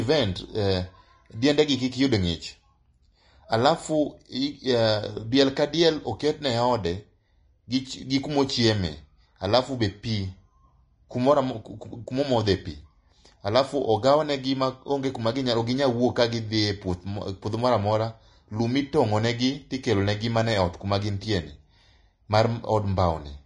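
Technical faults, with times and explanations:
Throughout: Vorbis compression. The speech sounds hissy and grainy, with nothing above 10.6 kHz, likely from low-bitrate Vorbis coding (fitting about 32 kbps) quantising treble detail into noise.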